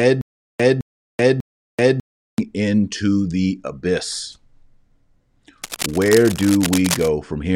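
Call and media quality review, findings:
Stutter with silent gaps, 0.00–2.38 s, under way from the first sample: a 0.21 s burst replays three times at an even 0.60 s period, with 0.38 s of digital silence between. Likely a player or stream stall, last fragment replayed on each retry, audio in between lost. Unlike concealment, the gaps are dead silence and the repeats are identical and evenly spaced.

Cable scratch noise, 5.62–7.08 s: dense, uneven scratching over the speech, about 10 dB below it. Likely a worn cable or connector moving, with contact resistance changing rapidly. Unlike a dropout, the noise rides on top of the signal and nothing is removed. Unlike steady hiss, it is irregular and bursty.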